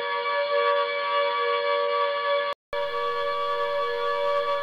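For the first 2.73 s the audio sounds dull and boxy, with nothing above about 5 kHz and a faint background noise well below the signal. A 200 ms gap follows before it opens up at the same level, most likely an input switched to a poorer device.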